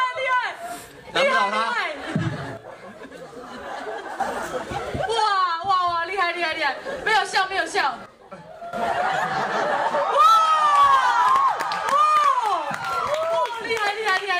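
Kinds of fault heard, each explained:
Sudden gain jump: The digital gain was likely switched in a single step with no ramp, as happens when a level setting or bit shift takes effect instantly. The sound and its background noise drop together, about 7 dB lower from 2.57 s to 4.2 s, then about 13 dB lower from 8.06 s to 8.73 s. Each time the level returns to full just as abruptly at the end.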